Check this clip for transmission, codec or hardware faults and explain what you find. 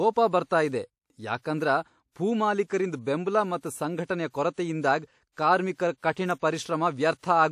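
There is one codec fault: pre-echo. It runs from 1.39 to 1.44 s, just after "ಬರ್ತಾ ಇದೆ". The codec spread quantisation noise across a whole transform block. Noise meant for a sharp attack leaked into the quiet 49 ms before it. That gap fills with short hiss, and the onset sounds smeared.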